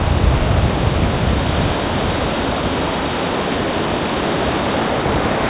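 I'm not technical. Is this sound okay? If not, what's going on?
Yes, no faults here; the sound came through a standard phone-call path, so nothing above 4 kHz survives and it has that ordinary narrow telephone quality.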